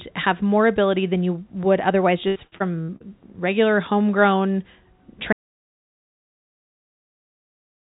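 Packets on this speech call were repeatedly lost or delayed between 2.28 and 3.02 s, just after "than you would otherwise": five holes, the longest 73 ms, about 240 ms in all, each patched by stretching the last sound. That leaves about a third of the span concealed, giving choppy, robotic speech until "regular homegrown". From 5.33 s to the end, the input likely dropped out through a lost device or link, so the recording holds silence with no room tone. Throughout, the narrowband call codec, consistent with G.711 A-law, cuts everything above 4 kHz.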